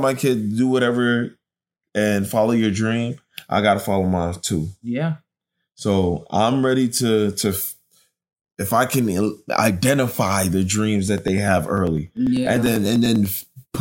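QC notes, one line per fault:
11.08 to 13.75 s, periodic USB or driver dropouts: after "can identify the dreams", a tiny slice of audio, about a millisecond, is skipped roughly every 0.1 s, some thirty times. Each missing slice splices the waveform abruptly, producing evenly spaced ticks that sound only under signal.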